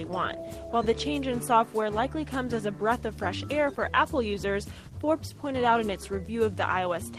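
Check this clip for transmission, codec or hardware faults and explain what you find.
No faults of any kind turn up anywhere here.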